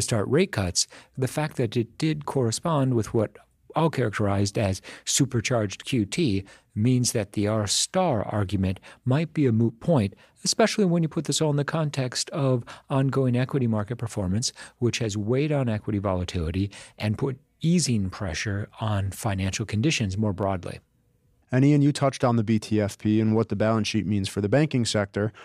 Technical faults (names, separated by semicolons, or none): dropped samples